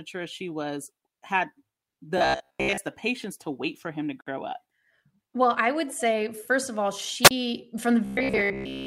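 From 2.18 to 2.78 s the speech turns into a rigid, metallic drone pinned at about 67 Hz while still loosely tracking the syllables. This is robotic sound from repeated short buffers, likely caused by audio arriving too seldom so that a slice of about 15 ms is looped for most of the stretch. That fixed, steady buzz sets it apart from a plain dropout. It returns from 8.05 s to the end at 8.86 s.

At 4.21 to 4.27 s a 55 ms gap at a join of encoded pieces cuts into the speech, with smeared edges. The sound then carries on exactly where it left off, which fits pieces about 6 s long joined with their encoder delay and padding left in.

At 7.24 to 7.31 s a wireless microphone squelch dropout occurs. Hiss swells, the output mutes for about 32 ms, and the speech comes back. The rising hiss before the hole distinguishes it from the smeared-edged gap of the join.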